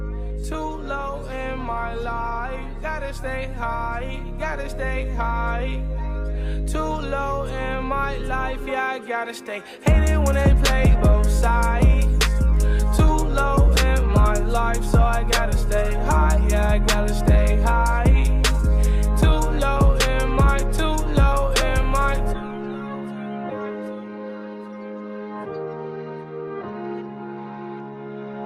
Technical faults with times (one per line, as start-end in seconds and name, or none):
none